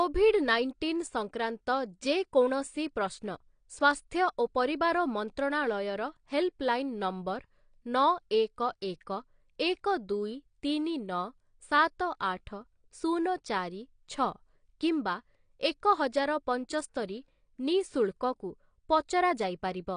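It's a speech clip, and the whole thing sounds band-limited and smeared: there's basically nothing above 9.8 kHz, so the top end is dull, and the codec damage is plainly audible as a watery, fizzy texture on sustained sounds and sibilants. That's likely AAC compression, with the coder quantising coarsely against its hearing model and pulling the cut-off down, which fits a low bitrate somewhere around 32 kbps.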